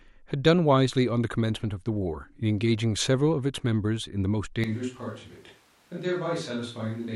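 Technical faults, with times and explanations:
4.64 s to the end, switch to a distant microphone: the close microphone's feed likely dropped out and a far-off one took over, so the voice abruptly turns roomy, hollow and thin in the bass, about 5 dB quieter, with room noise rising to roughly 30 dB below it.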